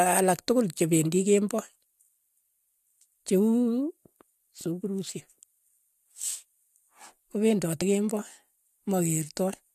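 At 7.80 s, compressed frames are skipped: about two frames, roughly 50 ms of speech, never play, so the audio jumps ahead in a frame-sized step.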